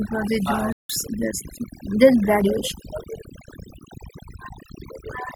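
Across the whole clip, overdone noise removal shapes the speech. The reduction was set so strong that any frequency band near its estimate of the noise is pulled down hard or switched off, taking the quieter parts of the voice along with it. The background sits close to silence, dotted with twinkling specks. Unlike a plain low-level gate, this works band by band, which is why the residue sparkles rather than simply pumping.

At 0.72 s, right after "for the", a corrupt frame was muted. The decoder rejected damaged compressed data and the player filled the gap with digital silence, so the sound drops out abruptly until 0.90 s. That hole of about 0.17 s fits two frame lengths. Timing is preserved, since the speech resumes where it should rather than jumping ahead. What separates it from a network dropout with concealment is the dead, flat silence instead of smeared or repeated sound.

At 2.41 s there is a corrupt FLAC frame. 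A flipped bit went through without the checksum catching it, so the decoder's prediction ran on wrong values from that point. Here the damage is brief, peaking at about -21 dBFS, with the following frame clean again. A muted frame leaves a hole, but this fault adds a spurious sound. It is also a short sharp event rather than a lasting offset or a full-scale burst of noise.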